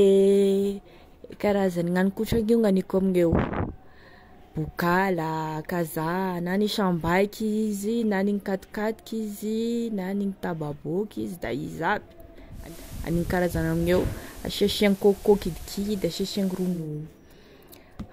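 At 12.5 s the receiver loses its digital signal and performs digital radio blending to analogue, cross-fading over about 0.26 s to the FM broadcast until 16.9 s. Hiss rises well below the speech, and level shifts by about 2 dB.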